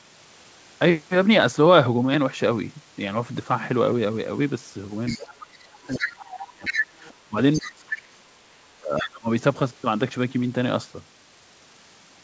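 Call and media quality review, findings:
Other side's voice leaking through, 5.06–5.46, 5.92–7.14 and 7.53–8.02 s: a second voice about 15, 5 and 10 dB under the talker, likely residual loudspeaker echo the canceller missed. It is an added voice, not a gap.

Speech suppressed in double talk, 5.12–6.72, 7.25–8.34 and 8.78–9.29 s: the talker dips by up to roughly 30 dB while the far side is active, likely the echo canceller ducking near speech during overlap. It is a loss of level, not an added voice.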